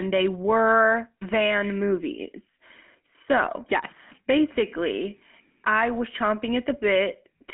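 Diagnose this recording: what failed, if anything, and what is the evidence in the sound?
GSM full-rate codec damage runs throughout, at the codec stage. The speech is confined to a telephone band of roughly 200 Hz to 3.4 kHz, with nothing above 3.8 kHz. It carries a plainly audible buzzy, gravelly roughness, which fits a 13 kbps full-rate coder. That coder rebuilds speech from a vocal-tract model driven by regularly spaced pulses, keeping only a third of the excitation.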